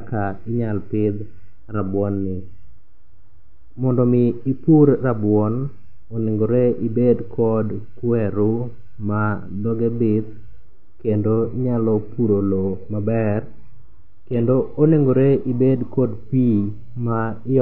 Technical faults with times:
11.44-15.44 adaptive stream at a lower bitrate

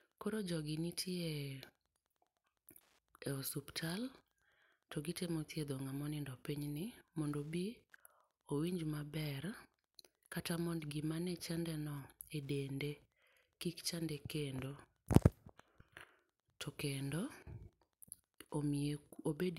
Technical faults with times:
0.00-19.58 Wi-Fi interference

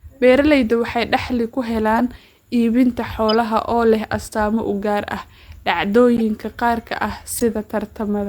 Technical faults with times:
1.98-2.00 corrupt frame decoded
3.29-3.34 corrupt frame decoded
6.17-6.20 corrupt frame decoded
7.36-7.42 corrupt frame decoded

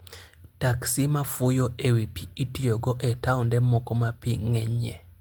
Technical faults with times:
none

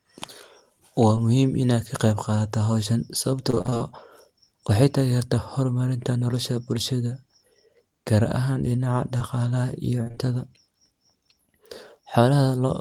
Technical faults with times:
1.15-1.18 short concealed packet loss
3.50-3.82 repeated packet loss (robotic sound)
9.18-9.22 short concealed packet loss
10.04-10.29 repeated packet loss (robotic sound)

